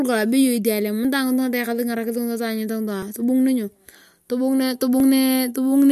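The audio was most likely handled in chunks of about two seconds, with a short piece lost each time one chunk closed and the next opened. This gap of audio missing between chunks is heard at 1.05 s, 3.02 s and 5.00 s, each time a brief slice of roughly 20 ms. The speech on either side is butted together without silence, so it jumps forward slightly, a small skip recurring at a steady two-second spacing.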